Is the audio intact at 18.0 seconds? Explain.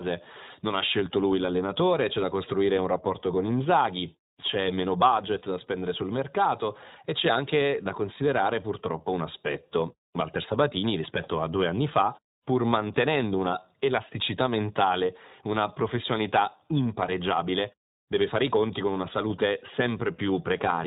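No. The iLBC codec colours the whole clip, including 18.0 s. It codes each 20 ms frame independently and drops everything above 4 kHz. The speech sounds muffled, rough and synthetic, which fits about 15.2 kbps.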